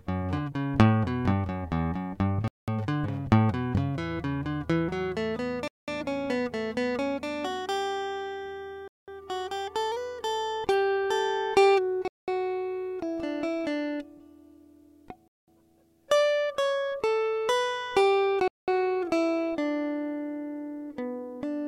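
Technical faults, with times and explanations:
2.48–2.68, 5.68–5.88, 8.88–9.08, 12.08–12.28, 15.28–15.48 and 18.48–18.68 s: gap between chunks. The music arrives in 3 s pieces with 200 ms of silence at each join, leaving regular short holes.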